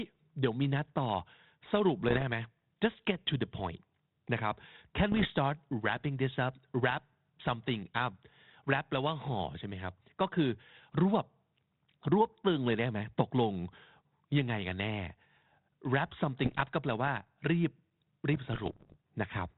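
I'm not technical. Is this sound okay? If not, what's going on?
No. The speech has short pops and rough, crackly bursts where the loudness briefly shifts, at 2.09 to 2.23 s, 5.12 to 5.30 s, 16.44 to 16.63 s, and a longer patch from 18.34 to 18.97 s. These are bit errors on an ADPCM link, like a cordless phone connection: a few bits get scrambled in transit, and because each sample builds on the last, one error throws the decoder off for a moment before it recovers.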